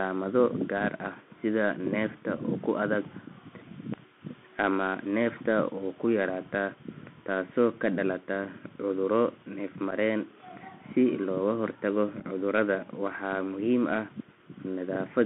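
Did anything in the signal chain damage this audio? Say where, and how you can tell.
Yes. At the codec stage, the Bluetooth CVSD headset codec has narrowed the whole clip to roughly 200 Hz to 3.5 kHz, which fits a 64 kbps CVSD link. Unlike a plain telephone band-limit, the one-bit delta coding adds a granular hiss under the speech and makes s sounds scratchy when loud high content outruns the adaptive step.

At the wireless link, unconcealed Bluetooth headset packet loss leaves two short, hard-edged holes at 9.91 to 9.93 s and 12.20 to 12.25 s. Each is about 7.5 ms of lost audio, fitting a single dropped packet. Nothing fills the gaps, which sets them apart from concealed network loss.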